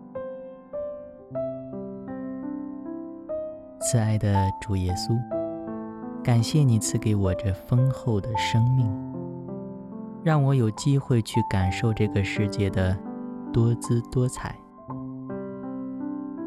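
Nothing technical stands out in this one; there's no fault to point to anywhere in the audio.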